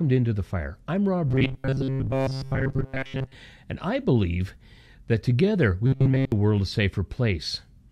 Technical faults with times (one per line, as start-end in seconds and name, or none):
1.27-3.35 robotic sound from repeated short buffers
5.86-6.32 robotic sound from repeated short buffers